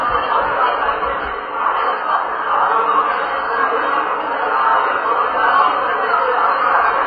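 From start to finish, nothing is heard above 4.8 kHz. The top is dull and smeared, with a warbling, fizzy texture. This points to heavy AAC compression, likely AAC-LC at a very low bitrate, one near 12 kbps. The encoder dropped the highs and coarsely quantised the rest.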